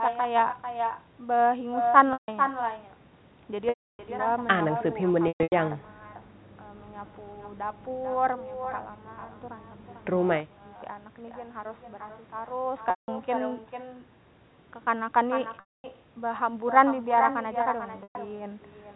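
From the start, echo with no canceller runs through the whole recording. The far end's loudspeaker feeds its microphone and nothing subtracts it, so every phrase returns roughly 400 ms later as a thinner copy about 6 dB below the direct sound.

Packet loss with pitch repetition occurs at 2.13 s (150 ms), 3.69 s (300 ms), 5.28 s (210 ms scattered across 240 ms, longest run 120 ms), 12.9 s (180 ms), 15.6 s (240 ms) and 18.03 s (120 ms). Each gap begins as a briefly held, buzzy repeated pitch cycle that fades to silence before the audio cross-fades back in.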